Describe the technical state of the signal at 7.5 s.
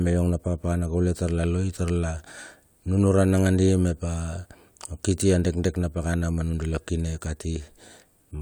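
At 7.5 s the speech signal is intact, with no audible fault at that moment.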